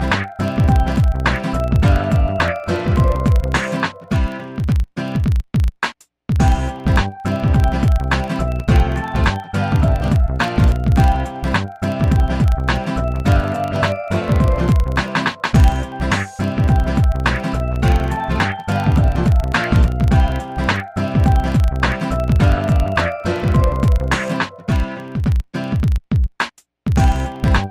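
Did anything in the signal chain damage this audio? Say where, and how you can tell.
Yes. There's a 25 Hz buzz running through the whole clip, riding the signal's level, and it points to a filter restarted on every block at the driver or buffer stage. Each 40 ms block starts the filter from silence, leaving a small tick every time.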